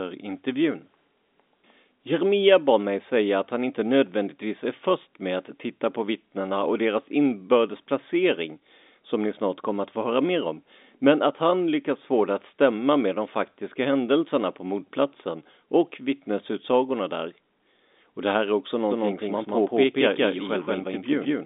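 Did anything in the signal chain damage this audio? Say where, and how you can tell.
Yes. From 18.91 s, after "det här är också", an equally loud, dry copy of the sound trails about a fifth of a second behind to the end: a doubled audio track, likely from a second, slower capture path.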